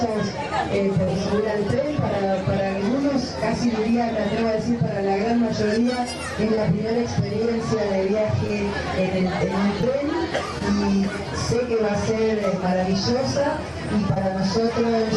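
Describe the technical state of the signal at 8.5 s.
Short concealed packet loss at 8.47–8.51 s: about 20 ms never arrived, and the decoder extrapolated the preceding sound to fill it, heard as a brief smear rather than a silent dropout.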